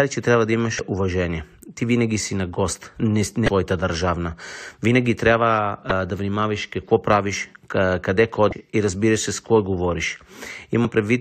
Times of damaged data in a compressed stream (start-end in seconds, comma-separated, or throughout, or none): 0.76-0.79, 3.45-3.48, 5.88-5.91, 8.49-8.53, 10.82-10.85